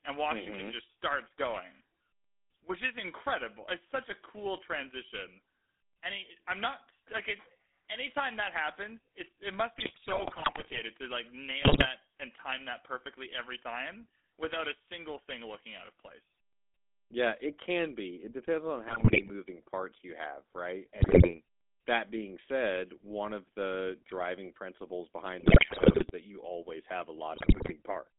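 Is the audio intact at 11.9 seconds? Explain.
No. At 11.9 seconds the sound carries GSM full-rate codec damage. The codec rebuilds the signal from a vocal-tract model driven by sparse pulses, which fits a 13 kbps codec. The result is a buzzy, gravelly roughness. On a spectrogram, energy sits only between 250 Hz and 3.6 kHz, with nothing above.

A burst of GSM bit errors ends just before this point, running from 11.62 to 11.87 s. Corrupted filter, pitch and gain values distort the spectrum and the level frame by frame, so the sound breaks into squawks, pops and gargling. On the waveform this shows as erratic level spikes. On the spectrogram it appears as smeared, blocky columns that stop just short of 11.9 s.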